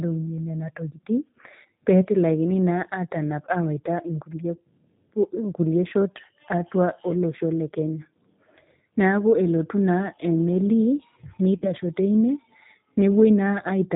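From the first second the speech sounds narrow, slightly rough and synthetic, with nothing audible above 4 kHz and plainly audible codec damage throughout. This is the G.729 codec, a character that fits G.729A at 8 kbit/s. Rather than carrying the waveform, it rebuilds the voice every 10 ms from a vocal tract filter, a pitch predictor and a handful of pulses. The fine detail that this sparse model can't capture comes out as that rough, artificial texture.

Between 11.58 and 11.72 s the voice smears into a stretched buzzy tone or coloured noise that weakens and fades, then stays thin and distorted briefly after it resumes. This is VoIP packet loss concealed by the speech codec. About 40 ms of audio went missing, which fits two lost 20 ms packets. The decoder filled the gap by repeating its last pitch and filter at falling gain. Because each frame depends on the previous one, the damage lingers past the gap itself.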